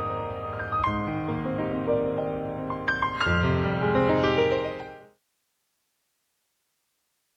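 No technical faults can be heard, and the level eases down smoothly from around 4 s to about 5.22 s with no step or click.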